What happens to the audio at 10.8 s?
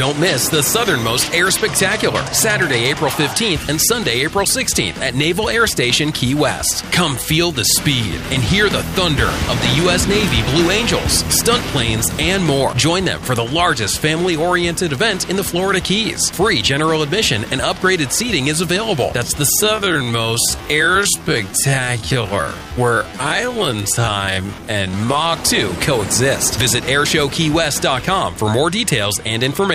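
Nothing goes wrong at 10.8 s; the audio plays through that moment intact, with no dropout, click, distortion or other fault to be heard.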